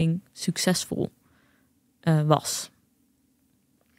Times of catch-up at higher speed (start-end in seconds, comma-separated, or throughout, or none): none